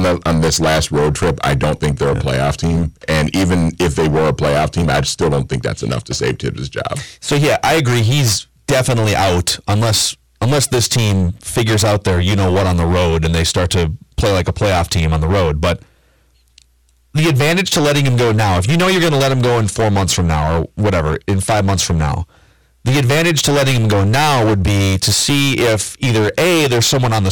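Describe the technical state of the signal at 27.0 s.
Hard clipping is present at 27.0 s, as it is across the whole recording. The speech is driven roughly 19 dB past what the signal path can carry, so around a third of the samples are sheared flat at that stage's limit, producing a harsh, buzzing fuzz on every loud syllable.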